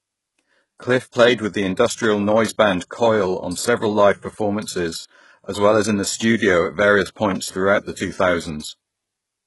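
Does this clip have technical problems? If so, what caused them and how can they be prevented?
Yes. Throughout the speech, sibilants sound gritty and lispy and the treble has a synthetic sheen, with nothing above 11.5 kHz, likely HE-AAC compression at a very low bitrate around 12 kbps, where the top band is rebuilt from copied lower bands. Encoding at a higher bitrate prevents this.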